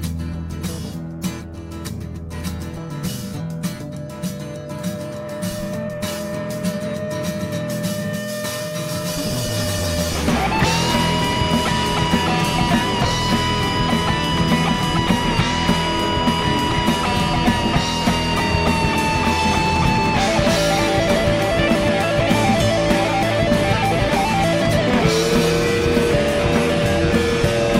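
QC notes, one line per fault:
No faults detected in this clip.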